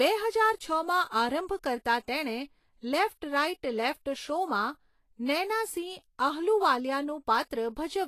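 From start to finish the speech has a grainy, hissy top with nothing above 14.2 kHz, likely Vorbis compression at a low rate, roughly 35 kbps, smearing treble detail into noise.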